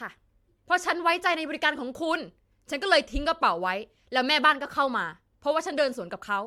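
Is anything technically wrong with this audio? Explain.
Yes. Throughout, the speech sounds swirly, hollow and smeared, with blurred attacks, likely from generation loss: repeated MP3 coding near 100 kbit/s, around seven passes, each adding fresh quantisation noise and spectral holes.

At 1.72 s there is a single sharp click, likely from dropped samples: roughly one sample missing, so the waveform jumps abruptly to a later value.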